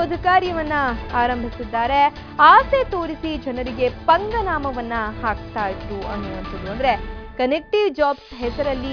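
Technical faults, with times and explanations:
No technical faults detected across the clip.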